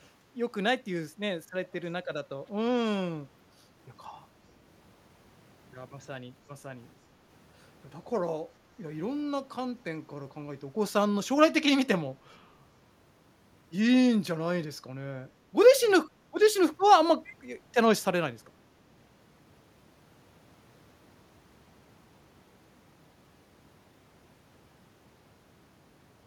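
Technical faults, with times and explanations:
17.24–17.36 s, echo leak: a faint copy of the speech returns 422 ms late, likely from a far-end loudspeaker the echo canceller missed. Unlike room reverb, it is a distinct delayed repeat.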